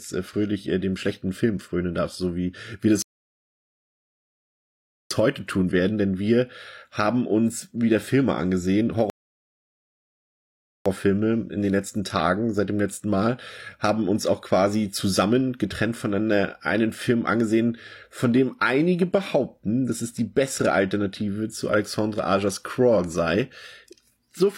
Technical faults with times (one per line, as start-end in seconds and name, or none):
3.02-5.11 rebuffering stall
9.10-10.86 rebuffering stall